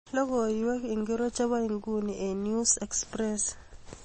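From start to finish the speech carries grainy distortion that tracks its level, likely from low bit depth without dither, consistent with about 9 bits. Unlike steady hiss, this grit sits roughly 35 dB down and fades with silence. Also throughout, the speech sounds watery and swirly with nothing above 8.3 kHz, likely from MP3 compression, fitting a bitrate near 32 kbps. Plain filtering would not warble like this.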